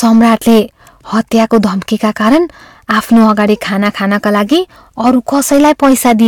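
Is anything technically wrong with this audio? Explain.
Yes. Hard clipping runs through the whole clip. The speech was driven about 8 dB past what the signal path could carry, so roughly one sample in twenty hits the ceiling and is cut flat, adding high harmonics heard as harsh crackle on louder syllables.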